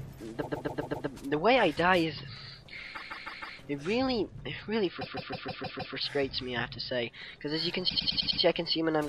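Repeated frames cause four stutters, where a short block of compressed audio plays again and again: 0.41 to 1.06 s (a 131 ms block, five extra plays), 2.94 to 3.57 s (157 ms, four), 5.00 to 5.94 s (157 ms, six) and 7.88 to 8.40 s (104 ms, five). Each adds about 0.5 to 0.9 s. A spectrogram shows identical patterns tiling side by side, and the waveform shows a copied shape repeating.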